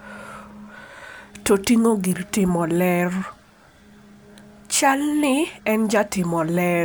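No technical faults are audible at any point in the recording.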